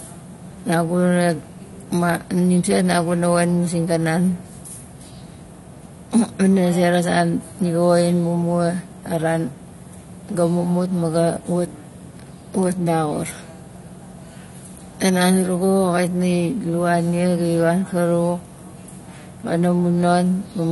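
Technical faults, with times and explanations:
Throughout, AAC compression: the speech sounds plainly dull and smeared, with a warbling, fizzy edge on sibilants and nothing above 11.5 kHz. This is likely an encoder dropping the top band and coarsely quantising the remaining spectrum, which fits a bitrate near 32 kbps.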